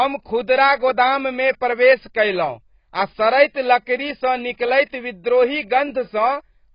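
Heavy AAC compression, likely at a very low bitrate around 16 kbps, affects the whole speech recording: nothing survives above about 5.1 kHz, so the sound is dull and muffled, with a smeared, warbling, fizzy texture on sibilants and held sounds.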